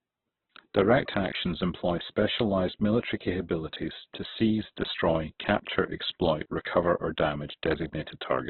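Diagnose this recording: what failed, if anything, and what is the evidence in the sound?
Codec stage: throughout, the speech is grainy and rough with nothing above 4.1 kHz, likely heavy Opus compression in its music mode, squeezed to narrowband at a very low bitrate near 8 kbps.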